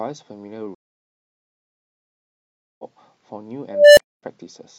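At 0.75 s the speech drops into silence for about 2.04 s, then resumes at 2.84 s roughly a second and a half further on. This is a stream reconnect: the connection broke, and the player rejoined the live stream with a fresh decoder.

From 3.69 s a tone of around 500 Hz swells over 284 ms into a loud squeal, then cuts to silence for 256 ms, ending at 4.23 s. This is an unstable filter: a recursive filter with bad coefficients grew without limit and overflowed until it reset.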